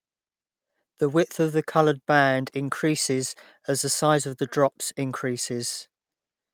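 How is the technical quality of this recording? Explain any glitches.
Nothing here catches the ear at all; the speech comes through without a single glitch worth pointing out.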